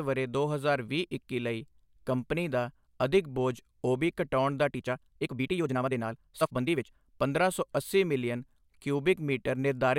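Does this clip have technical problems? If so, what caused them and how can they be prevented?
Yes. Right after "ਬੋਝ ਓਬੀ ਕਟਾਉਣ ਦਾ", from 4.67 to 6.95 s, there's a time-stretched section. The speech suddenly runs about 1.64 times faster with the pitch unchanged, so it comes across rushed. That's likely software squeezing the passage to fit a set length by dropping short slices. To prevent it, re-edit or trim the material rather than forcing it into a fixed duration.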